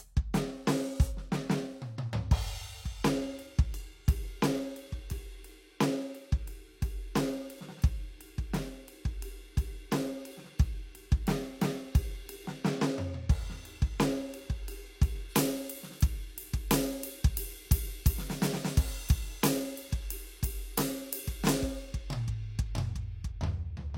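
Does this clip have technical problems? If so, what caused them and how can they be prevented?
Yes. From 15.3 s to 23.3 s the music turns thin, bright and sibilant because pre-emphasis was left on: the treble boost applied for transmission was never followed by the matching de-emphasis cut, leaving 10 kHz about 11 dB hotter than 1 kHz, which fits the 50-microsecond FM curve. On a spectrogram the upper bands abruptly brighten at 15.3 s. To prevent this, apply the matching de-emphasis filter wherever pre-emphasised audio is received.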